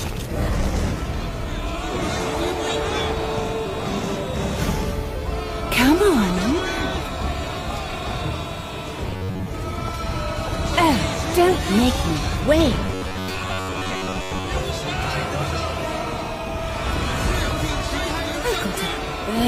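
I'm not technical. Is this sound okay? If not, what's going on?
No. Twice the sound turns into a stiff, metallic buzz: briefly from 9.11 to 9.48 seconds, and longer from 12.85 to 14.50 seconds. This is robotic sound from repeated short buffers. The likely cause is audio arriving too slowly, so the player keeps replaying its last tiny slice, about 11 milliseconds long, to fill the gap. During those stretches most of the sound is these repeats, which stamp a fixed hum of about 94 Hz over it.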